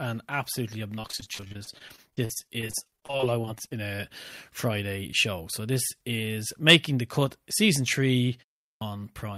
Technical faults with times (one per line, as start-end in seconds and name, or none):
0.95-3.73 repeated packet loss (robotic sound)
8.69-8.81 clipped start after a pause